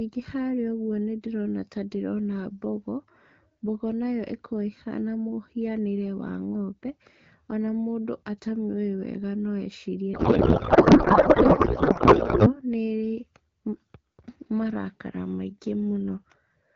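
From 10.13 to 12.60 s, a codec payload misread: the receiving side unpacks the AMR wideband bits in a different layout from the sender, which fits octet-aligned frames being read as bandwidth-efficient, so every field lands in the wrong place. The decoder still produces output, but the speech gives way to garbled noise and warble that barely tracks it, until both ends agree on the format again and the clear HD Voice sound, consistent with 12.65 kbit/s, returns.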